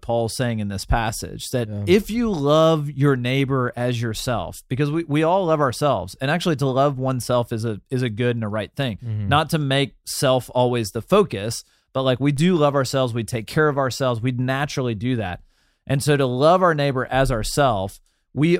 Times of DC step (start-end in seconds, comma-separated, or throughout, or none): 12.37